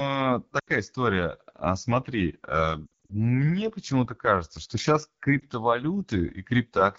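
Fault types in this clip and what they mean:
AMR wideband (HD Voice) codec, throughout: the speech is coded up to 6.4 kHz from a pulse-excited vocal tract model with noise filling the top band. The rough, raspy texture points to one of its lowest rates, around 8.85 kbit/s.
Lost AMR speech frames, 0.59–0.69 s, 2.85–3.13 s and 5.40–5.44 s: failed frames were rebuilt from the last good pitch and vocal tract settings at falling gain. This gives a drop to near silence at 0.59 s, scattered short dropouts at 2.85 s and a brief dip at 5.40 s.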